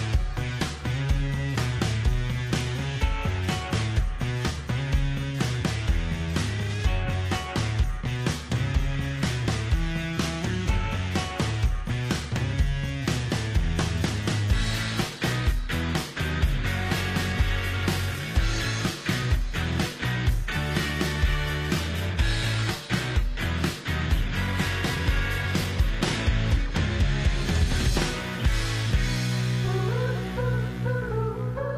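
From 14.87 s to 26.87 s, a twelve-second stretch, the audio is an adaptive stream at a lower bitrate. The treble abruptly thins, with nothing above about 14.9 kHz, which fits a fall from high-rate AAC to HE-AAC at roughly 24 kbit/s. Unlike a dropout or buffering stall, the switch leaves no gap, and unlike a fixed low-pass it snaps back to full quality at the end.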